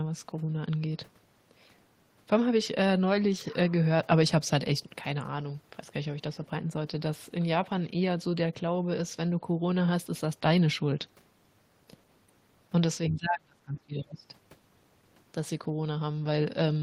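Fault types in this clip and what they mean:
Speech suppressed in double talk: between 13.1 and 14.26 s the speech sinks sharply, by something like 30 dB at its deepest, and over roughly a second of that stretch it's pulled down or chopped into pieces. The likely cause is an echo canceller meeting double talk: with both ends talking at once, it couldn't tell the local talker from loudspeaker echo, so it turned everything down together.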